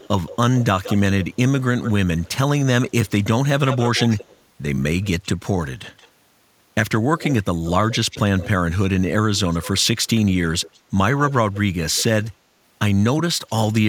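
Echo leak runs through the speech at 0.0 to 2.29 s, 2.9 to 3.11 s, 3.69 to 4.38 s, 5.02 to 6.08 s, 7.18 to 8.49 s, 9.36 to 10.07 s and 10.6 to 12.29 s. A copy of the voice trails it by about 175 ms, creeping from 173 to 179 ms. It sits between about 10 and 30 dB below the speech. The likely cause is a loudspeaker echo canceller letting residual pickup return.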